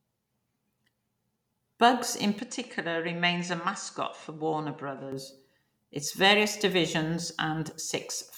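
At 2.39 s the speech abruptly goes duller and a few dB quieter, with nothing above 9.4 kHz and a faint new noise floor, then clears at 5.12 s. That's most likely the input switched to a poorer device, with no gap at the switch.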